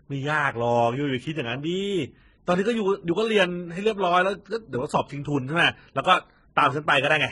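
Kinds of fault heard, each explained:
Transcoding between lossy codecs: The speech carries two layers of coding damage at once, with nothing above 11 kHz throughout and the different artefacts of each codec heard together. This likely comes from a low-bitrate HE-AAC encode, around 12 kbit/s, later re-encoded as MP3 near 39 kbit/s. The MP3 stage spent its limited bits reproducing the earlier artefacts while adding its own, and the lower bandwidth limit persisted.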